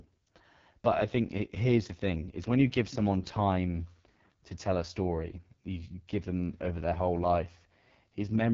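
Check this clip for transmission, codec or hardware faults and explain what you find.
One codec fault runs through the whole recording: the speech has passed through the AMR wideband (HD Voice) codec at a very low rate. From start to finish, nothing is present above 7.3 kHz, and the speech is heavily damaged, with a rough, raspy grain. That fits AMR-WB's lowest mode, about 6.6 kbit/s, where the pulse-driven vocal tract model has too few bits and the 6.4 to 7 kHz band is only shaped noise. The band reaching near 7 kHz, rather than stopping around 3.4 kHz, separates it from narrowband AMR.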